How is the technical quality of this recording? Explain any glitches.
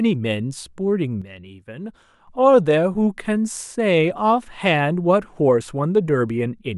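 There's one clear glitch. From 1.22 to 2.28 s the speech and background drop together by about 9 dB in a sudden gain jump, likely a gain setting applied without any ramp.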